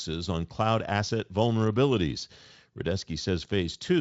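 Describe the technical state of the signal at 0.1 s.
At 0.1 s the speech is intact, with no fault at that moment; the Speex coding carrying it adds no audible damage, and the band stops around 7.6 kHz.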